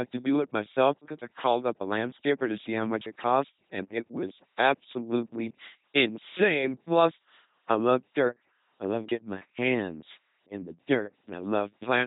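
From start to finish the speech carries the buzzing, mechanical robot quality of the LPC-10 vocoder at 2.4 kbit/s. Each moment is rebuilt from a ten-pole filter fed by either a pulse train or noise, so misjudged voicing gives buzz or hiss. Unlike a band-limited codec, nothing sounds natural, and nothing remains above 3.8 kHz.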